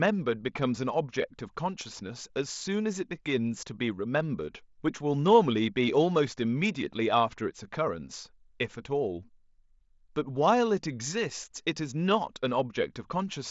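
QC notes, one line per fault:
No faults found in this speech clip. It comes through a Bluetooth mSBC headset codec, so the sound stops at about 8 kHz and carries a light grain on louder passages.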